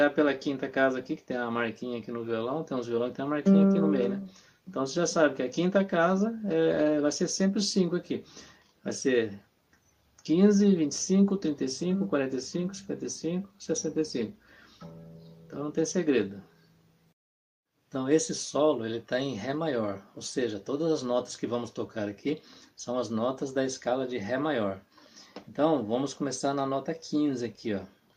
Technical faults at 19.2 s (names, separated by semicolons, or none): none